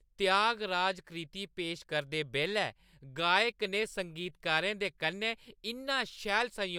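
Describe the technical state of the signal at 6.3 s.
Around 6.3 s the signal is intact, with no audible dropout, distortion, glitch or other technical fault at that moment.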